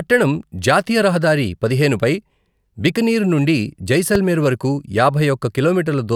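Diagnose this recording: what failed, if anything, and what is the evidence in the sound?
A loud pop lands at 4.15 to 4.17 s, just after "బికనీర్ నుండి": a single sharp pulse peaking roughly 10 dB above the speech, which carries on uninterrupted beneath it. The stage is likely the analogue wiring, where a plug, switch or static discharge injects a sudden voltage step. The circuits downstream round that step into a brief thump lasting about 23 ms before the signal settles.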